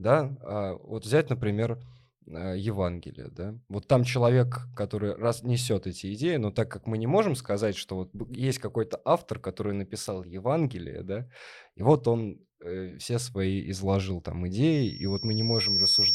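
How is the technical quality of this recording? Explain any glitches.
The recording has one clear fault near the end. From 14.72 s, just after "все свои изложил там", the microphone picks up its own loudspeaker and the loop runs away at 5.5 kHz. This loudspeaker feedback squeal swells over about a second into a piercing tone, roughly 5 dB above the speech, that lasts to the end.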